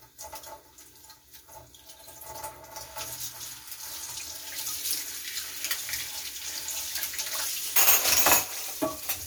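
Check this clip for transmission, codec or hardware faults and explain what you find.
No faults found.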